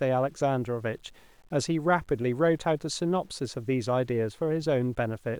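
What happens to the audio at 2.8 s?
At 2.8 s the speech is still carrying the same fault it has throughout the clip: low bit depth without dither. The samples were likely truncated to very few levels, which fits a 9-bit word, with no dither to break up the rounding. The error therefore tracks the signal itself, sitting only around 40 dB below it, so the speech sounds grainy and gritty, and the roughness shifts as the sound rises and falls rather than staying a steady hiss.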